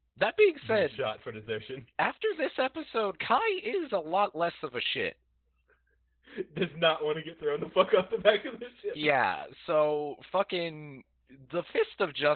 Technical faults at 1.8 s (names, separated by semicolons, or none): Opus voice compression